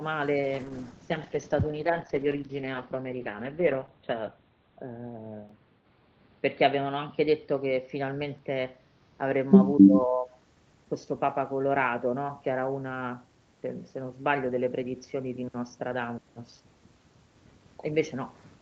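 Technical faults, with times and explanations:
0.41 to 8.44 s, call bitrate drop: the speech turns coarse and watery, and its top end narrows from about 8 kHz to about 4 kHz, leaving it muffled. The roughest stretch lasts about 4.6 s before detail returns. The sound fits the call's bandwidth estimate falling and the Opus encoder being told to work with far fewer bits, roughly 12 kbps instead of 32 kbps. It quantises more crudely and drops the upper band.
9.81 to 10.33 s, speech suppressed in double talk: for about half a second the speech sinks sharply, by around 20 dB at its deepest. The likely cause is both parties talking at once. The echo canceller could not tell this talker apart from the far side's loudspeaker echo, so it clamped down on everything it picked up during the overlap.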